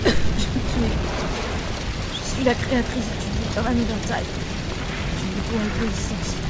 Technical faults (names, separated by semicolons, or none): none